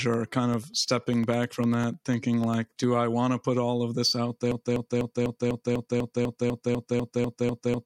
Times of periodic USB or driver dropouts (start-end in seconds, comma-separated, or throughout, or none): 0.14-2.94